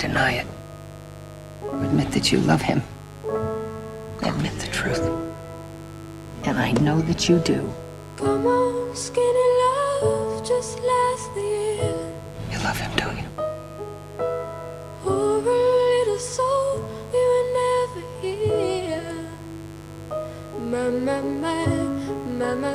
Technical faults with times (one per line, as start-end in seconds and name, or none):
0.00-22.75 mains buzz